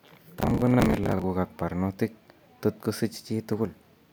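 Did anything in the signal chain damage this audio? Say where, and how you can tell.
Yes, at the driver and buffer stage. Processor overload crackle from 0.40 to 1.24 s, just before "ak barnotik", as dozens of roughly 10 ms buffers missed their deadline and replayed stale audio.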